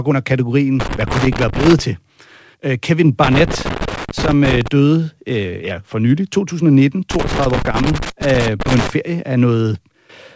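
A worn or dirty contact making and breaking intermittently chops the speech, producing loose connector crackle: irregular scratchy bursts from 0.80 to 1.79 s, 3.24 to 4.68 s and 7.11 to 8.90 s.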